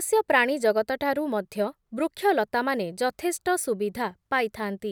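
Listening to the speech here, nothing technical stood out at any point.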